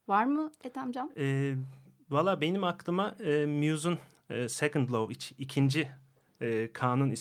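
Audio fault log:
No faults can be heard in this speech recording. Nothing in the signal chain draws attention at any moment.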